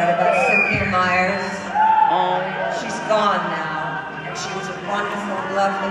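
No technical faults can be heard anywhere in this audio.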